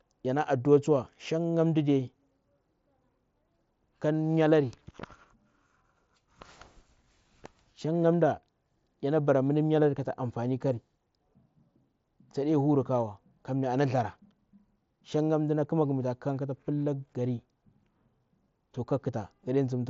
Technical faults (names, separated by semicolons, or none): none